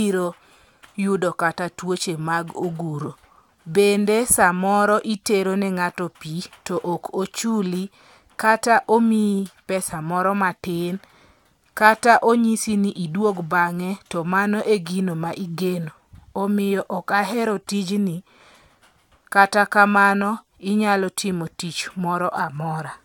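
No audible technical faults.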